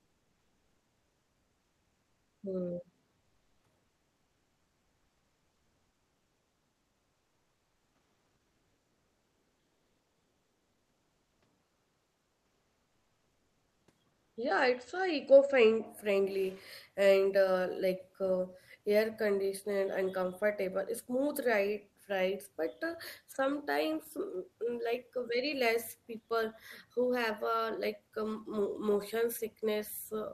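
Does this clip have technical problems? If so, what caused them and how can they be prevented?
Yes. In pauses at 3.86–11.42 s, 11.64–13.87 s and 14.12–14.36 s, the real background becomes a flat, featureless hiss, about 2 dB quieter (about 4 dB in the last). This is comfort noise in place of the background, likely from discontinuous transmission such as Opus DTX: the sender stops sending during silence and the receiver synthesises noise. Turning off DTX on the sending side keeps the real background.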